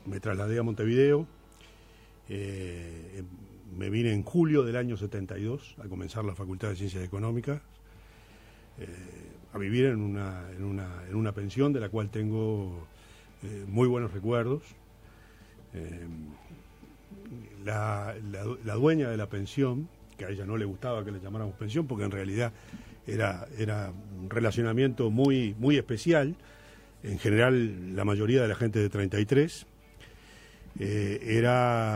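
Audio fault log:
25.25 s, electrical switching spike: a single sharp snap sits on top of the sound, fairly low at around -25 dBFS and over almost instantly. The likely cause is a nearby switch, motor or static discharge arcing briefly and being picked up on the audio line.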